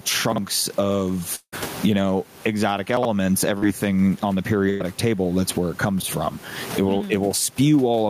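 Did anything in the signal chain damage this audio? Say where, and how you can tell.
Yes. The whole recording shows gain pumping. Loud and soft parts sit closer in level than they should and the sound is squashed, with a level swing of about 25 dB, while the room noise otherwise sits about 32 dB below the speech. The cause is likely at the capture stage, in the analogue gain and call processing: input gain set far too high, with a fast limiter clamping every peak. A steady noise floor would not do this, and that separates pumping from plain room noise.

Chunks out of order occur three times, at 0.32 to 0.38 s, 2.97 to 3.05 s and 6.00 to 6.04 s. Each is a short jumbled moment. The audio is cut into 20 ms pieces, and one of them plays late, by two, three and one chunk respectively. This points to the network jitter buffer or a buffered write stage. Nothing is missing, and none of the sound is smeared or held. 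The material is all there but in the wrong sequence, which rules out packet loss.

A long network dropout runs from 1.35 to 1.54 s. The last sound is carried on as a fading fill for about 170 ms, with roughly 70 ms of near-silence where the fill has died away. Speech then resumes further along, with about 180 ms of real audio gone. The likely cause is a stall in delivery on the network path. Its length and the dead stretch before recovery set it apart from the shorter loss events in this clip.

Short concealed packet loss appears at 3.58 to 3.63 s and at 6.98 s. Each is a brief smear or wobble where 40 ms and 20 ms of audio never reached the decoder. The receiver filled the holes with about 30 ms and 19 ms of continued sound and then blended back into the real signal. These gaps are far too short to fade into a hold or silence, and that separates them from the burst and the dropout.

A burst of packet loss sits at 4.70 to 4.82 s. 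Here about 100 ms of audio was lost on the network. The receiver's concealment bridges the entire gap with about 100 ms of continued sound that weakens as it goes, with no silent stretch before speech picks up again further on. It is longer than the short concealed losses. Unlike the dropout, it never falls away into silence.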